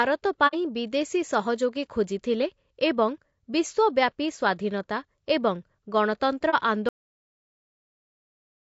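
Throughout the speech there is a plainly audible rough, grainy texture: noise fills the gaps between the voice's harmonics, and the top band sounds thin and somewhat synthetic. This is likely low-delay AAC compression of the AAC-ELD kind, at a rate that fits roughly 32 kbps. It codes about 500 frequency lines a frame with a low-delay window, and at so low a bitrate the coarse bit budget lets noise in between the harmonics. Unlike ordinary low-bitrate AAC, the damage is graininess rather than swirly pre-echo around onsets.

From 0.47 to 0.55 s the sound fades out and back in around a brief hole, about 60 ms of audio missing, which points to two consecutive lost frames. A shorter hole of the same kind, about 30 ms and consistent with a single lost frame, comes at 6.50 to 6.54 s. This is AAC frame loss with muting. The decoder zeroed the missing spectra, and the overlapping windows taper the edges. 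That soft-edged shape is what distinguishes it from a hard dropout or from a glitch that repeats audio.

At 6.89 s the audio is a cut-off end. The speech stops mid-sound and drops straight to digital silence, which lasts to the end, with no decay or fade. The final buffers were never written or played. The abrupt edge and the lack of any tail separate this from the muted frame losses, which close up again after a few tens of milliseconds.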